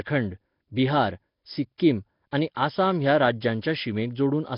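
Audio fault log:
Throughout, Nellymoser compression: the speech has a heavy, rough hiss clinging to it and a smeared, underwater feel, and there's nothing at all above 5.3 kHz. That points to the old Flash microphone codec, likely running at about 22 kbps. It spends a fixed, small number of bits on each block, so the quieter bands get starved and filled in with noise. That's where the grainy halo and murky, closed-in top end come from.
1.78 s and 2.55 s, pre-echo: right before each of these sharp attacks there's a brief hiss, about 18 ms long, and the onset itself sounds softened rather than crisp. The codec works on whole blocks and spreads its coding noise evenly across each one. When a loud attack lands late in a block, noise sized for the loud part spills into the quiet moment just ahead of it, so the hiss shows up before the sound actually starts.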